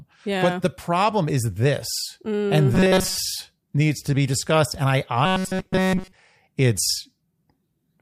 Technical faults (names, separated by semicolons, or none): robotic sound from repeated short buffers